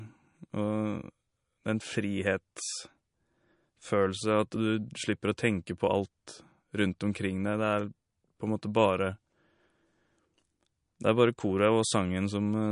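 Speech runs the whole way through with plainly audible codec damage, most likely MP3 compression at a low bitrate, something around 40 kbps. Nothing comes through above 10.6 kHz, where the encoder simply chopped off the top end to save bits. The swirly, watery texture and the metallic edge on the s sounds come from weak frequency lines dropping in and out frame to frame, and consonant attacks sound smeared.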